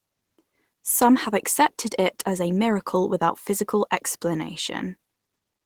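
Nothing in this speech recording stands out as a technical fault, so there's simply nothing here to flag.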